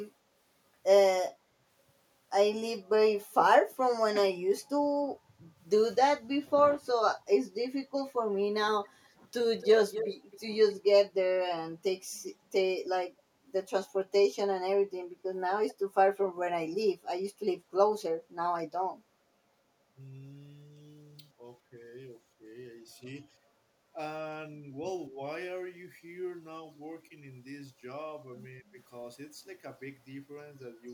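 From 9.59 to 10.38 s there's an echo leak, a copy trailing about 267 ms behind at roughly 10 dB down, likely a far-end echo canceller letting loudspeaker pickup through. A much fainter scrap returns at 15.68–15.74 s, 248 ms late.

Then come stretches of speech suppressed in double talk at 19.93–21.79, 22.11–22.47, 22.82–23.98, 24.51–25.22, 27.09–27.13 and 28.36–28.78 s. The talker dips by around 10 dB, and by as much as 25 dB in that last one. It's likely the canceller ducking both sides while they overlap.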